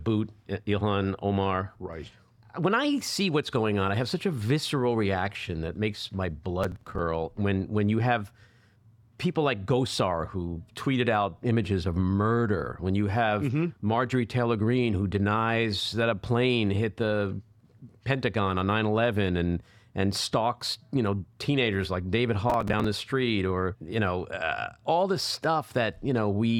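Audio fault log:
6.64–6.99 s and 22.50–22.84 s, processor overload crackle: two bursts of gritty, tearing crackle, each about a third of a second long. The first comes after "reaction that makes my", the second just before "the street or you". In each, the processor fell behind on a run of short buffers, around 5 ms each, missing about twenty over the stretch. Each missed buffer was skipped, leaving a tiny hard-edged gap, and the string of gaps fuses into crackle until the load passes.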